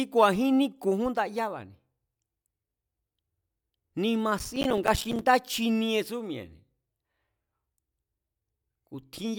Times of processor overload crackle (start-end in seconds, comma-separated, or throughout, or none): 4.39-5.22